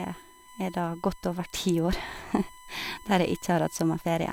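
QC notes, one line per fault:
Throughout: USB whine, a steady fixed-pitch tone at 1 kHz sitting roughly 25 dB under the speech, from USB bus current in 1 ms frames leaking into power or ground.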